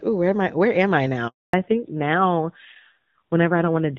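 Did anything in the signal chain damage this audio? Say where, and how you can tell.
Yes. At the network stage there's a handover gap. Right after "am I", at 1.28 s, the sound dies away quickly and stays silent until 1.54 s, about 260 ms. No speech frames arrived while the call switched networks, so that stretch is simply lost.

From 1.54 s to the end there's a fallback to narrowband at the codec stage. Before that, the HD Voice band sounds clear. Afterwards nothing above 4 kHz survives, and the sound goes dull and rough, which fits a low-rate AMR narrowband mode around 7.4 kbit/s.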